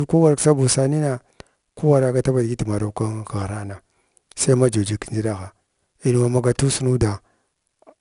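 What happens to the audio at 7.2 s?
At 7.2 s you're hearing the same 4-bit ADPCM compression that runs through the whole speech clip. Each sample is coded as a small 4-bit step away from a predicted value, with the step size adapting as it goes, so the coding error rides along with the signal as a gritty hiss on the louder parts. It's plainly audible, and there's nothing above 10.6 kHz. That bandwidth limit, along with the 88 kbps rate, points to a sample rate around 22 kHz, which dulls the top end too.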